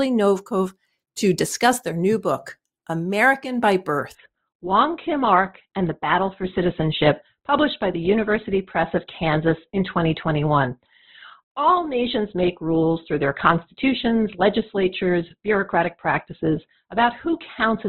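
Speech that turns suddenly dull at 4.15 s, with nothing above 4.2 kHz through to the end: an adaptive stream at a lower bitrate, consistent with a drop from roughly 64 to 12 kbit/s Opus.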